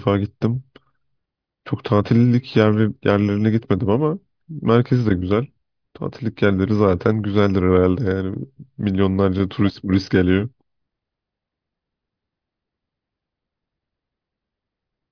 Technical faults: none

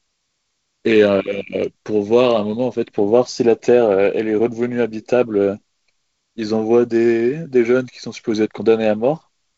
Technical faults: none

